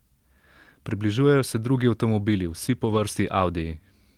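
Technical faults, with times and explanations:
0.89–0.91 s, lost packet rebuilt from error correction: a brief rough, noisy patch just before "se drugi", with no gap, because a lost packet was replaced by the lower-bitrate copy carried in the next packet. The 20 ms length fits a single lost packet.
2.85–2.99 s, lost packet rebuilt from error correction: a longer stretch of grainy, degraded sound without dropout, as about 80 ms of audio was played from low-bitrate redundant copies, which fits four separate lost packets.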